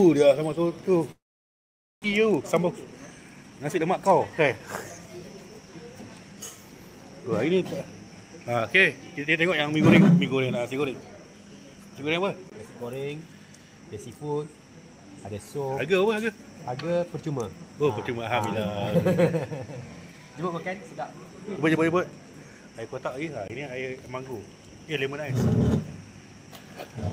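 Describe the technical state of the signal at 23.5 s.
A block of digital silence runs from 23.48 to 23.50 s, a 20 ms gap where the sound drops out abruptly, likely because the output buffer wasn't filled in time. With no fade at either edge, it lands as a brief, abrupt hole in the sound.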